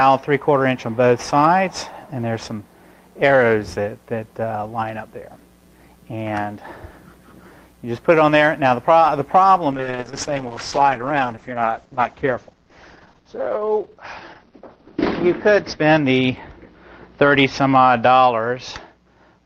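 Call bitrate drop from 9.72 s to the end: everything above 6 kHz vanishes and the audio turns coarse and watery, which fits an encoder cut to about 8 kbps.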